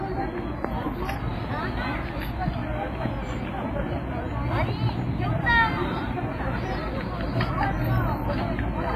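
Everyday sounds with heavy WMA compression damage throughout. It rings and smears with a washy hiss that breathes with the signal, likely from a low bitrate around 24 kbps. A spectrogram shows a hard ceiling at 15.5 kHz with patchy, blocky holes where weak detail was dropped.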